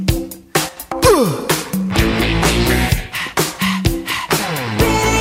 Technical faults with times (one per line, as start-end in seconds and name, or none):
0.69-0.77 one channel drops out